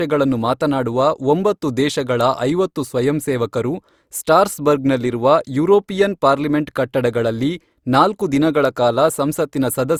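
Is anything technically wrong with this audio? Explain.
Yes. Throughout, the speech sounds swirly, smeared and hollow, with blurred attacks, likely generation loss from about three lossy Opus-style passes, each adding fresh quantisation noise.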